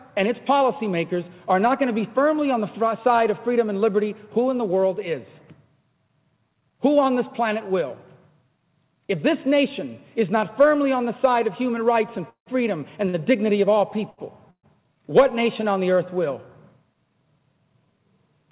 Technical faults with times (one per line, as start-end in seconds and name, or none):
12.29-12.49 call audio freeze
13.09-13.16 short stall from a late packet
14.10-14.20 short stall from a late packet
14.50-14.66 call audio freeze